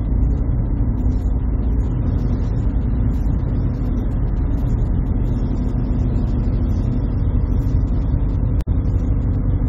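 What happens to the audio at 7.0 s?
Nothing goes wrong at 7.0 s; the audio there plays through intact, with no dropout, click or other fault.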